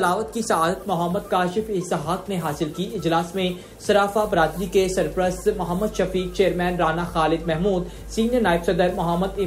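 The audio runs clean for the first few seconds, then at about 4.24 s a steady 50 Hz mains hum appears and stays to the end of the clip. It's a low, constant drone sitting roughly 15 dB under the programme, with a few low harmonics thickening it. The 50 Hz pitch points to the power line bleeding into the signal, most probably through a ground loop or a transformer sitting close to the cabling.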